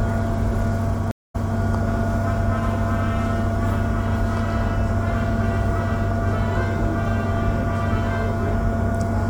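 At 1.11 s a stream reconnect breaks the sound. The connection drops and playback goes silent for 175 ms. A fresh decoder then rejoins the stream. Sound resumes 261 ms earlier than where it stopped, so a short stretch repeats. All settles by 1.55 s.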